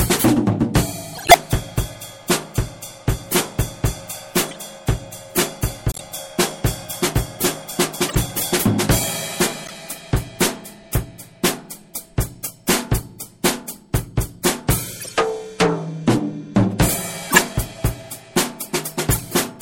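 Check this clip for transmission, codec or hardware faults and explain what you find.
Two faults here: a compression artefact running the whole way through, and a string of short corrupt-frame bursts on top.

The first is MP3 compression, likely at a low bitrate, and the smeary texture fits something around 64 kbps. It's plainly audible for the whole clip. The quieter detail has a watery, swirling quality. That happens when an encoder short of bits drops weak frequency lines, and they flicker in and out from one frame to the next. Sharp onsets come across softened rather than crisp.

The second is corrupt frame decoded, eight times: 1.15 s, 4.48 s, 5.90 s, 8.08 s, 9.65 s, 15.00 s, 17.30 s and 19.11 s. Each runs from roughly a few to several frames, somewhere between 70 and 200 ms, with the one at 1.15 s the longest. In each case the decoder played frames with flipped bits, so garbled gains and codes put energy in the wrong places. 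You hear chirpy, squeaky bursts, and the ones at 1.15 s and 17.30 s are the loudest.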